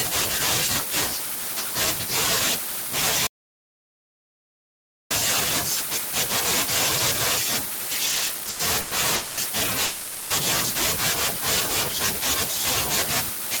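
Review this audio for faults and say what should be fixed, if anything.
An audio dropout to silence runs from 3.27 to 5.10 s, removing about 1.8 s of speech. The input was likely lost, through a disconnected device, failed link or mute, while writing continued. The waveform shows a flat line and the spectrogram a completely blank column with no room tone. Securing connections and monitoring input levels during recording would prevent it.

Repeated stalls (stutter) fill 8.05 to 8.93 s. In 16 separate gaps, none longer than 100 ms, the receiver's buffer ran dry and it stretched the last sound, filling 340 ms in total, about 39% of that span. Nothing is lost, but the speech drags. On a spectrogram this appears as repeated short horizontal smears, and the waveform shows repeated cycles. A larger or adaptive jitter buffer and a steadier network path would prevent it.

A call audio freeze occurs at 9.15 to 9.39 s (220 ms) and again at 9.85 to 10.32 s (450 ms). 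Packets were likely held up in transit, so the last sound was extended as a buzz or hiss until the stream resumed, adding delay without losing anything. Spectrograms show flat, frozen frequency bands, and the waveform shows a repeating pattern. Reducing network congestion or prioritising voice traffic would prevent it.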